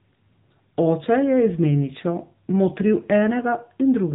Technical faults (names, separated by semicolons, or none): AMR narrowband mobile codec